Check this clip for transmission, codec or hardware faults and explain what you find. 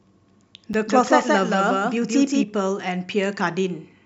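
Two faults are audible in the speech.

Block of digital silence at 0.73 s: for about 7 ms the sound drops straight out and returns with no fade. That gap is probably an output buffer left unfilled in time, and at this length it comes through as a tick or dip.

Doubled audio track from 0.87 to 2.43 s: a second full-band copy of the speech runs roughly 200 ms behind at about equal level, likely picked up again through a slower capture path. It has no decay or room colour, so it sounds like a flat repeat that switches on and off abruptly at both ends.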